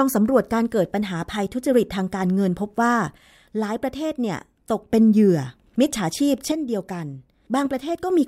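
From 3.18 to 4.90 s and again from 6.52 to 8.10 s, the speech drops abruptly by about 6 dB and then snaps back. That pattern points to one channel drops out, likely one stereo channel going missing before the mono sum, so the shared content loses half its contribution. Unlike a fade or compressor pumping, the level steps down and up instantly with no ramp, and it settles on the same fixed 6 dB loss both times.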